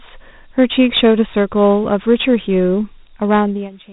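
A speech recording with a dull, gritty quality all the way through: the top end stops around 3.8 kHz, and a rough hiss rides along with the voice. That is Dialogic VOX ADPCM at work. The format keeps only a 4-bit difference per sample, so quantisation error comes out as grit that tracks the speech. The low ceiling, together with plainly audible coding damage, points to a telephone-grade VOX file at roughly 32 kbps. From 2.66 s to the end, a thin, piercing tone at 5.9 kHz appears and swells over about a second until it sits about 5 dB above the speech. This is a loudspeaker feedback squeal. A microphone was hearing its own loudspeaker, and at that one frequency the loop returned more than it received. Each pass around the loop made the tone louder, and nothing broke the loop before the clip ends.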